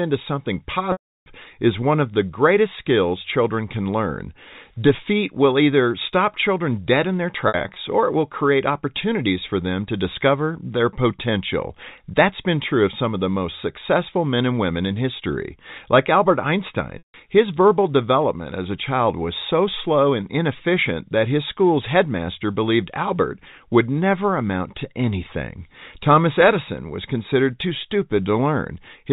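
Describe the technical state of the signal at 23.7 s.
At 23.7 s the speech is intact, with nothing wrong beyond the narrow telephone band and faint level-following hiss of the G.711 telephone coding it passes through.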